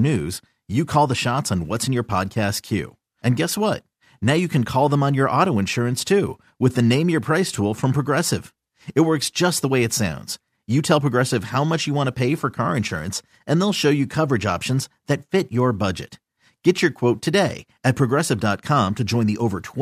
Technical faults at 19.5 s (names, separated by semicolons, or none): none